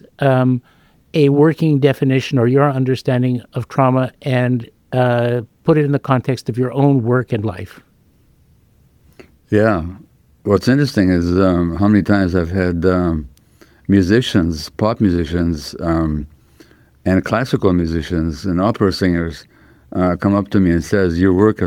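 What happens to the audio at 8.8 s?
Nothing goes wrong at 8.8 s; the audio plays through that moment intact, with no dropout, click or distortion.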